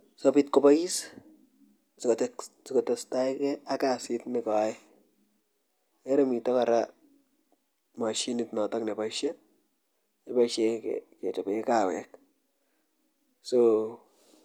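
No technical faults detected.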